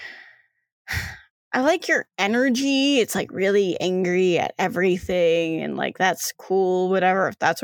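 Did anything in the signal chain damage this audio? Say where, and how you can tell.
No, nothing along the signal chain has left audible damage on this speech recording, and the signal holds steady throughout.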